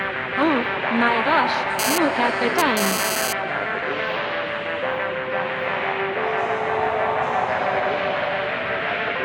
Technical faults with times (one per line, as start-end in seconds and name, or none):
1.79-3.33 GSM phone buzz